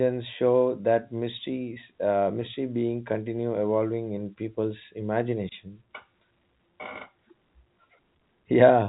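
Nothing stood out on listening to this speech recording, which carries the narrow band typical of telephone coding.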